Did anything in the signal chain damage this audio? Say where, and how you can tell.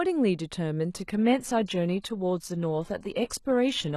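Yes. At 0.96 s the speech abruptly loses its top end and turns thin and synthetic, with codec artefacts rising, and it stays that way to the end with no gap or dropout at the switch. That is an adaptive stream at a lower bitrate: at the network stage the player fell back to a cheaper rendition when throughput dipped. The sound fits a change from roughly 96 kbit/s AAC to a 16 kbit/s HE-AAC stream that rebuilds the treble synthetically.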